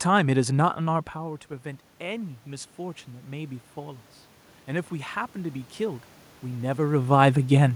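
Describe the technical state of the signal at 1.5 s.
Automatic gain rising is under way from 0.88 to 4.09 s: after the input fell by about 14 dB, the control lifts gain by about 5 dB, swelling voice and room noise together.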